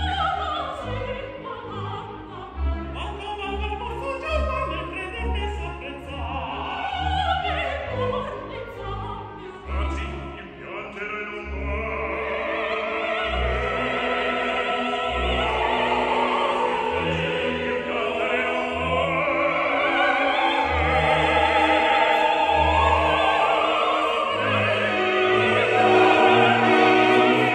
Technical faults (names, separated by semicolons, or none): none